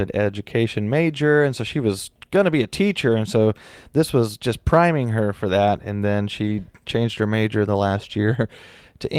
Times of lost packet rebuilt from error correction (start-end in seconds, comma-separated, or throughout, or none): 6.43-6.49